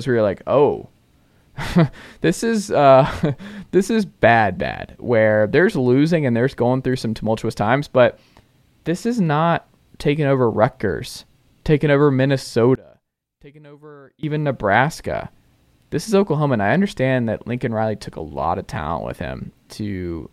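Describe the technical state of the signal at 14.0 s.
At 14.0 s the speech has collapsed to a faint remnant, sitting about 27 dB below its normal level, and it stays that way from 12.75 s until 14.23 s. The most likely cause is one channel inverted: with one side's polarity reversed, everything the two channels share cancels when they are summed to mono, so the centred speech and its low end nearly disappear, leaving only the small difference between the sides.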